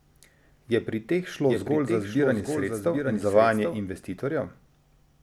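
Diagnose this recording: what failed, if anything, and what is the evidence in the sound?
A doubled audio track runs from 1.47 s to 3.81 s. The speech is heard twice, with a full-band copy trailing roughly 0.7 s behind and sitting roughly 5 dB below the original. The copy has no decay or room colour and switches on and off abruptly. The likely cause is a routing or buffer fault that feeds the same signal in a second time through a slower path. On a spectrogram, each syllable's pattern reappears fainter about 0.7 s later, with hard vertical edges at both boundaries.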